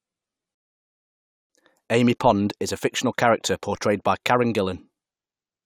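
At 0.55 s a rebuffering stall starves playback: silence, a flat waveform gap, until 1.50 s, then the speech resumes exactly where it stopped.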